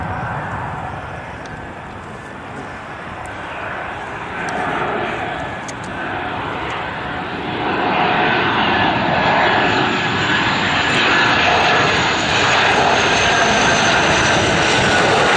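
Nothing to flag here: the audio runs without any technical faults to point to.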